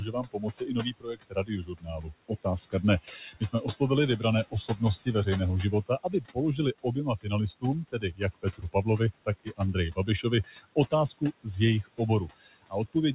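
Noise suppressor artifacts run through the whole clip. The suppressor pulls the room noise down by about 18 dB between phrases and lets it back up under speech. The band stops at 4 kHz, as a G.711 call codec would.

Speech cut by the noise suppressor comes at 0.0–3.81 s, 4.19–5.07 s, 5.72–11.47 s and 12.38–12.95 s. The suppressor mistakes soft speech for noise and turns it down by up to about 22 dB. Quiet syllables sound swallowed, most in the first and third stretches.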